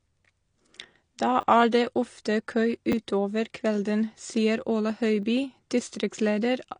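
Throughout the speech, everything above 10.1 kHz is missing, and the remaining band sounds dull and smeared, with a fizzy, warbling edge on sibilants. This is plainly audible AAC compression damage, likely from AAC-LC at a low bitrate around 32 kbps. On a spectrogram the energy stops abruptly at 10.1 kHz. The codec discards detail it judges inaudible, and at this rate it also sacrifices the top octave.

From 1.41 to 1.43 s, a repeated buffer occurs when the output device runs dry and replays its last block. The same fragment, which fits a 10 ms buffer, sounds three times in a row with hard joins, so about 20 ms of real audio is lost. It comes across as a brief buzzy stutter. In the waveform, identical short segments sit side by side with sharp discontinuities at each seam.

At 1.71 s, pre-echo softens an attack. A short hiss rises for about 16 ms before the onset, and the attack itself sounds blunted. 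The transform spreads quantisation noise across its whole block, so noise sized for the loud transient also fills the quiet gap just before it. On the spectrogram a thin smear of broadband noise leads the onset instead of a clean vertical edge.

The same repeated-buffer fault returns at 2.92 s and again at 5.22 s. Each time a single 10 ms block plays twice, losing about 10 ms of audio. Both are heard as a short click-like stutter. The waveform shows one duplicated segment bounded by an abrupt step at each join.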